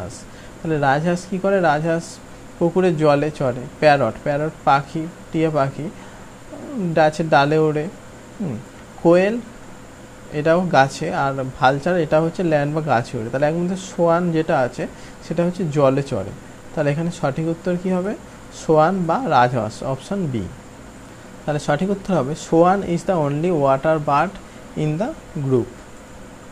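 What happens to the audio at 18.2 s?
Nothing goes wrong at 18.2 s; the audio plays through that moment intact, with no dropout, click, distortion or other fault.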